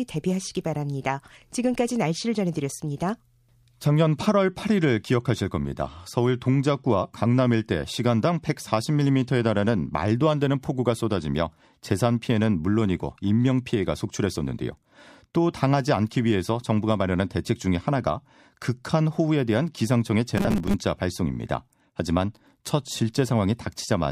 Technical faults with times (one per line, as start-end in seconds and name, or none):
20.38-20.75 robotic sound from repeated short buffers